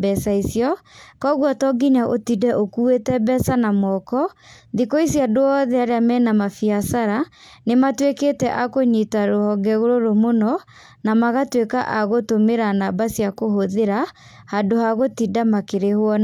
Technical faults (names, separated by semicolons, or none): none